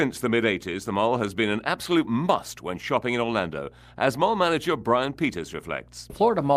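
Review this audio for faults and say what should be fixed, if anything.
A steady low drone sits under the speech from start to finish, a tone at 60 Hz with some low harmonics above it, roughly 25 dB below the speech. That is mains hum: the 60 Hz power line has leaked into the signal path, through a ground loop between connected devices or through magnetic coupling from a nearby transformer or power supply. To prevent it, power all equipment from one grounded outlet, use balanced cables or a ground-lift isolator, and keep audio leads away from transformers.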